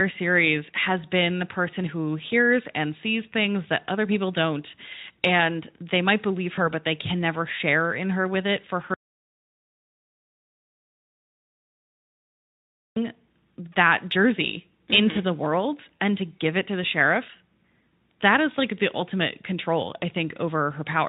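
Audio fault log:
6.55–6.68 s, VoIP packet loss concealed by the speech codec: a brief buzzy or noise-like smear that fades as the decoder stretches its last pitch and filter over a missing stretch of about 20 ms, consistent with one lost frame.
8.94–12.96 s, audio dropout to silence: sound cuts off abruptly into about 4.0 s of silence with no room tone, likely from the input link or device being lost.
15.97–16.02 s, VoIP packet loss concealed by the speech codec: a short buzzy or noise-like, fading smear as the decoder extrapolates across roughly 40 ms of missing audio, fitting two lost frames.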